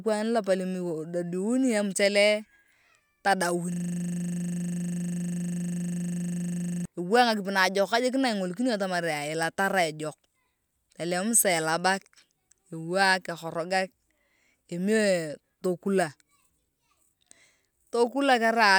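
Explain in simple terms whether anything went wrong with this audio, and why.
From 3.72 to 6.85 s, the computer briefly froze while the sound hardware kept replaying the same 40 ms scrap of speech from its buffer, a system hang loop. That tiny piece repeats 25 times a second, so the speech turns into a steady buzz.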